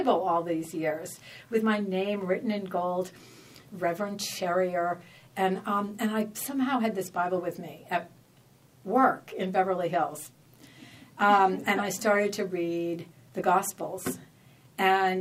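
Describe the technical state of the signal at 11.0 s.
At 11.0 s the signal is intact, with no audible fault at that moment.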